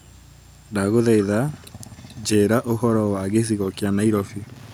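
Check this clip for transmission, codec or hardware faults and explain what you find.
Two faults are audible in this speech: a delayed, faint repeat of the talker in two stretches, and steady ticking interference toward the end.

From 1.18 to 1.26 s and again from 1.61 to 2.23 s, a copy of the speech trails about 432 ms behind, quiet in the first stretch and fainter still in the second. This is likely echo leak: a far-end loudspeaker's output reaching its microphone and escaping the echo canceller.

From 2.92 s to the end, a low-level tick repeats every 102.4 ms, about ten per second. This is Wi-Fi interference: a nearby radio's periodic beacon bursts are rectified by the audio circuitry and appear as a regular ticking under the signal.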